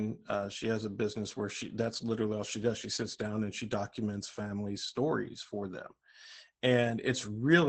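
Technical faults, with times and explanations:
Throughout: Opus voice compression. The speech passes through the SILK linear-prediction coder at a rate that fits roughly 12 kbps, coarsely modelling excitation, so it sounds muffled, hoarse and faintly robotic; a spectrogram shows nothing above about 8.6 kHz, a flat ceiling across the whole clip.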